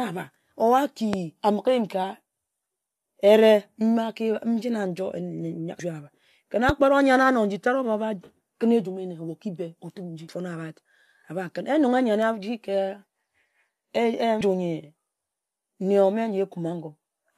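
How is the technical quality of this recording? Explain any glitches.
The recording has two kinds of glitch: two loud pops and three places where compressed frames were skipped.

Loud pops occur at 1.13–1.16 s, just before "a mighe", and at 6.69–6.72 s. Each is a single sharp thump, roughly 15 dB above the speech, and the talking carries on underneath it. The cause is likely a sudden voltage step, such as a plug, switch or static discharge, that the downstream circuitry shaped into a short pulse. On a waveform each pop is a tall, narrow spike. On a spectrogram it is a thin vertical stripe across the whole frequency range.

Compressed frames skipped occurs at 5.78 s, 10.27 s and 14.40 s. At these points whole blocks of encoded audio were never decoded, so the speech jumps forward: about 150 ms at 5.78 s and 14.40 s, and about 400 ms at 10.27 s. The skips are whole multiples of a 23.2 ms frame, which fits a 1024-sample frame at 44.1 kHz. 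Because neighbouring frames overlap, each join is a brief smeared blip, not a hard click. On a spectrogram the harmonic pattern changes abruptly at a soft vertical seam.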